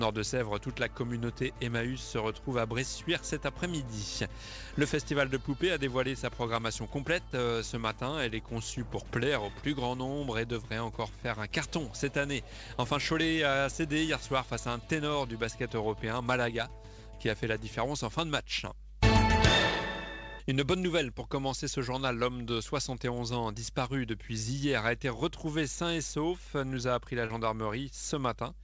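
At 27.26 s, short concealed packet loss: about 40 ms never arrived, so the decoder extended the preceding sound, leaving a brief smear with copied-looking, blurred spectrogram texture beneath the 8 kHz ceiling.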